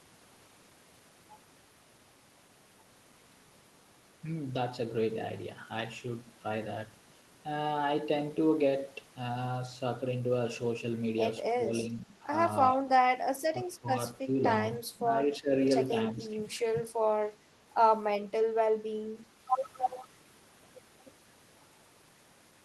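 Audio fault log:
11.92 to 16.4 s, speech suppressed in double talk: five short dips at 11.92, 13.52, 14.96, 15.41 and 16.13 s, the longest near 0.4 s, dropping the speech roughly 10 to 15 dB. This is likely an echo canceller ducking its own talker during overlap. The waveform shows notches in the envelope.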